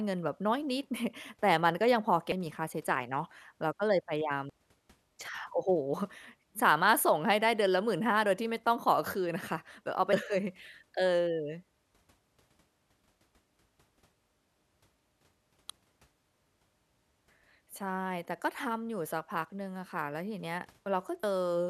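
Five brief blips interrupt the speech, at 2.32, 4.50, 10.13, 15.70 and 21.23 s. Each lasts only a few milliseconds. All five are damaged data in a compressed stream. At these points some of the encoded bytes are wrong. The decoder misreads the affected frames and loses its place. It then hunts for the next valid frame header. Each error comes out as a short chirp, squawk, click or hole cutting across the speech.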